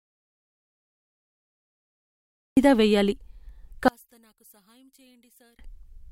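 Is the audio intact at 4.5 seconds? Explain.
No. From 3.88 to 5.59 s the speech nearly vanishes, dropping by about 36 dB to a faint residue. The likely cause is one channel inverted: with one stereo side's polarity reversed, the shared centre content cancels when the two channels are summed to mono.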